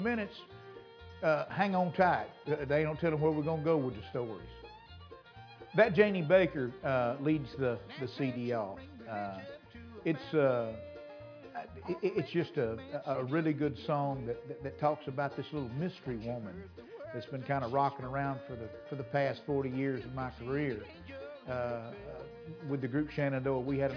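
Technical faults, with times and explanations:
No technical faults, with times and explanations, are present in this audio.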